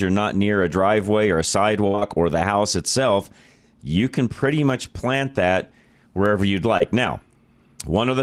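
From 1.87 to 1.96 s the sound turns into a held, fading continuation of what came before: a burst of packet loss. The receiver stretched the last sound across about 61 ms before resuming 60 ms further on. Two brief smears follow at once, 1.96 to 1.99 s and 1.99 to 2.03 s, each a short concealed packet loss where about 20 ms never arrived and was patched by extending the last sound. A similar wobble at 6.77 to 6.82 s is another short concealed packet loss, with about 27 ms filled in for 20 ms of missing audio.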